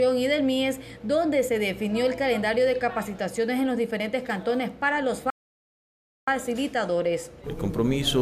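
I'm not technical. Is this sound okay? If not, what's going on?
No. At 5.3 seconds the sound cuts out completely and stays silent for almost a full second, until about 6.28 seconds, then carries on. This is a playback stall: the player most likely ran short of data or got held up, so it had nothing to send to the speakers until it caught up. Unlike a quick dropout, which is a split-second blip, this gap is long enough to feel like the audio froze.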